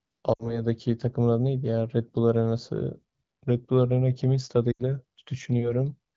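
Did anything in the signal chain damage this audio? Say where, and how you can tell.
Yes. The damage is at the network stage: lost AMR speech frames, at 0.34 to 0.64 s and again at 4.71 to 4.83 s. In each gap the sound drops to near silence within two frames, and it returns weak or rough for a moment. The concealed stretches amount to about 60 ms and 80 ms, which fits runs of three and four frames. The AMR-WB decoder at 12.65 kbit/s repeated its last good pitch and vocal tract settings with falling gain.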